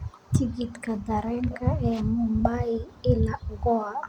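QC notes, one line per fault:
No fault found in this speech clip.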